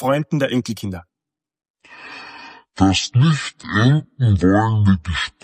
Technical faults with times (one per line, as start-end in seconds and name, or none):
1.09-5.44 section at the wrong speed